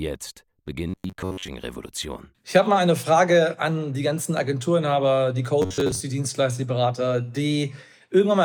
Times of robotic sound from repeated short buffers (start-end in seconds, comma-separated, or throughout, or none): 0.89-1.49, 5.62-6.00